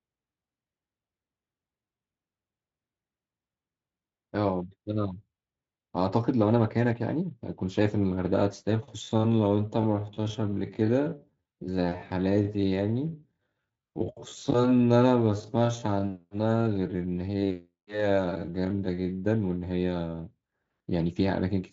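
From 8.99 to 19.21 s there's a time-stretched section. The speech suddenly slows to about 0.57 times its pace while the pitch holds steady, so it drags. It's likely software stretching to fill a length by repeating short slices. The Speex codec underneath sounds clean, topping out near 7.6 kHz, which fits its 34 kbps setting.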